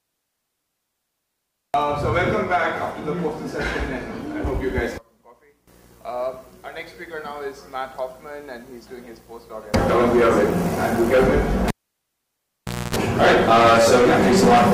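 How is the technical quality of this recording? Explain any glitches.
The recording has one clear glitch: a cable pulled and plugged in between 11.68 and 12.96 s. A live lead was disconnected and reinserted, so a pop opens roughly 1.23 s of near silence, then a 60 Hz mains buzz lasts about 0.27 s while only the plug tip makes contact, and a second pop marks the sound returning.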